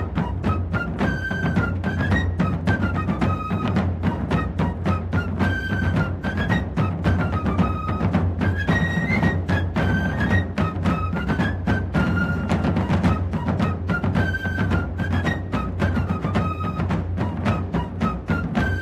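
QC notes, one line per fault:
Nothing to flag on this one: no faults turned up anywhere in the audio.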